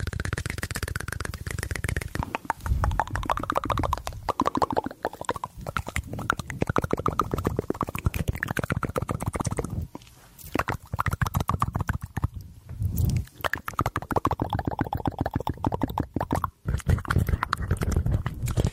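At 9.41 s and again at 15.39 s the sound skips forward with no gap of silence, likely audio missing between chunks of about 6 seconds, losing roughly 20 ms each time.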